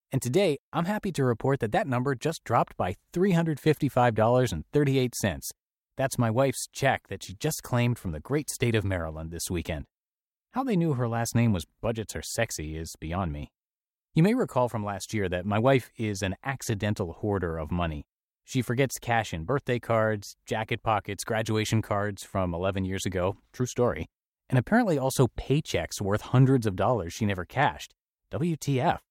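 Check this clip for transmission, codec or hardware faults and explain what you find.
Listening through this speech recording turns up no transmission, codec or hardware fault anywhere in it.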